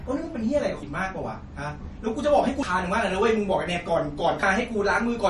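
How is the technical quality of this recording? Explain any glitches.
The speech has two audible problems: compression damage throughout and three skips.

Likely MP3 compression, throughout: plainly audible watery, swirly artefacts and nothing above 11.4 kHz point to a low bitrate, around 40 kbps, starving weak frequency lines.

Audio missing between chunks, at 0.83, 2.63 and 4.43 s: about a fifth of a second drops out at each join, likely lost as 2-second chunks are switched, leaving abrupt skips.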